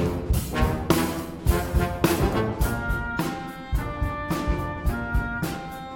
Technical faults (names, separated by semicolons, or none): none